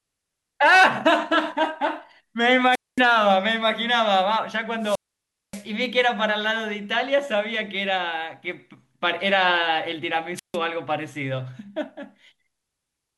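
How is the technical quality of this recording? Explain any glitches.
Three wireless microphone squelch dropouts break the speech, at 2.71–3.01 s, 4.80–5.66 s and 10.35–10.57 s. The FM radio signal fades, hiss swells, then the receiver's squelch mutes for about 0.22, 0.58 and 0.15 s. That static rise before each silence distinguishes it from a clean digital gap.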